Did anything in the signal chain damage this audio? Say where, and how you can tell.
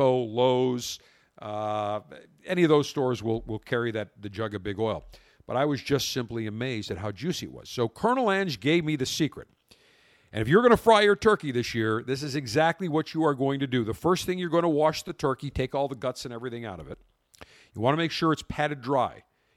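No, no damage is audible.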